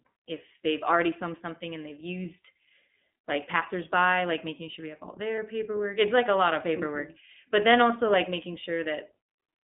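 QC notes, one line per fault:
throughout: iLBC codec. The call path runs through the iLBC narrowband coder, which rebuilds each frame's excitation on its own. The rough, slightly synthetic grain fits its 15.2 kbps mode with 20 ms frames. The line is held to about 200 Hz to 3.6 kHz, so the speech loses its low body and all the air and sibilant detail above 3.6 kHz, and the coding damage is plainly audible as a rough, synthetic edge.
5.36 to 5.39 s: lost iLBC frames. A packet dropped out, and the decoder filled the 20 ms hole by repeating the last pitch cycle blended with noise. That brief concealment is heard as a tiny held, faintly buzzy smear in place of the real sound. The length points to a single lost frame. Because each iLBC frame decodes without depending on the one before, the voice snaps back to normal right after the gap.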